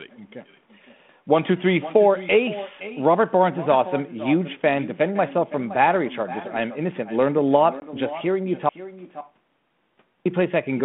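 From the start, every phrase of the speech is trailed by an echo with no canceller. The far end plays the call through a loudspeaker. Its microphone picks that sound up again, and nothing removes it. The copy returns after roughly half a second, about 15 dB below the direct speech. It sounds thinner. Because the delay is so long, it lands as a distinct repeat rather than a blur.

At 7.8 s comes packet loss on an ADPCM call. About one packet, 20 ms of audio, is lost and filled with silence, ending at 7.83 s. The hole has hard edges. The G.726 decoder at 32 kbit/s adapts its prediction and step size from past samples, so after the gap it no longer tracks the sender. Speech resumes slightly distorted, with brief roughness. It settles within tens of milliseconds. The codec's light damage and its 150 Hz to 3.5 kHz band stay steady around this point.

At 8.69 s the speech stops dead in an audio dropout to silence. 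The gap runs to 10.26 s, about 1.57 s. It is silent, with no room tone and no echo tail. Whatever was said in that stretch is gone. The likely cause is a lost input, such as a link failure, a disconnected device or a mute, while writing continued.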